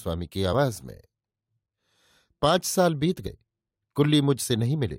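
Compressed frames are skipped twice: whole frames of the encoded stream never reach the output, either missing from the file or rejected by the decoder as corrupt. At 0.52 s the speech jumps ahead by around 50 ms, and from 3.26 to 3.29 s by about 20 ms. At each jump a sliver of the speech simply vanishes.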